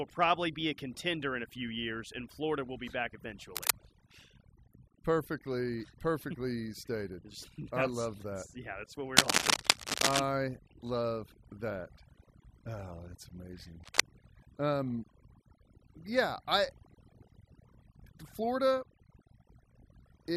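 Overdone noise removal runs throughout: an aggressive reducer mutes bands near its noise estimate, leaving near-silent gaps with twinkling specks. Cable scratch noise bursts from 3.56 to 3.72 s after "will be back", 9.17 to 10.20 s after "that's what we", and 13.84 to 14.01 s after "that's amazing". Each is a rough rustle a little louder than the speech, likely from a worn cable or connector shifting its contact.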